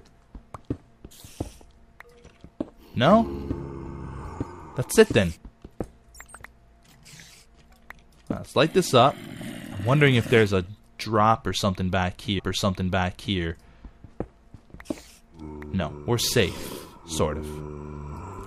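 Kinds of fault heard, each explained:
Stream segment repeated, 12.38 to 13.38 s: the playback chain handled the same chunk of the stream twice, either fetching it again or leaving it queued after it had already played. At 12.38 s the audio jumps back and replays roughly a second of material, adding 1.0 s to the running time. A small blip marks the point where the repeat begins, and after 13.38 s the sound continues from where the duplicated section ends.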